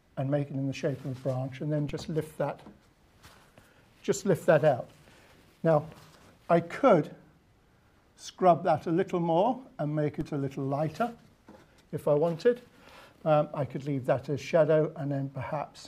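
A low thump at 1.89 s and again at 10.21 s, each a DC step of about -29 dBFS where the audio's zero line jumps, then decays through a 20 Hz high-pass.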